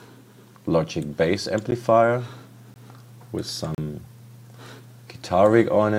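At 1.71 s, from 2.74 to 2.76 s, and from 3.75 to 3.78 s, the audio drops into blocks of digital silence lasting 10, 20 and 35 ms, where samples were replaced by zeros. The cut and return are unfaded. The first is a tick and the last a short hole.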